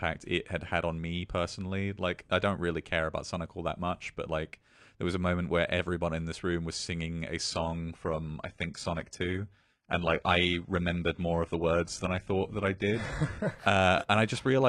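From 7.5 s, right after "room was singing a", codec artefacts suddenly rise, with no gap, until 13.5 s. This is an adaptive stream at a lower bitrate, dropping for six seconds from what sounds like around 96 kbit/s AAC to roughly 16 kbit/s HE-AAC.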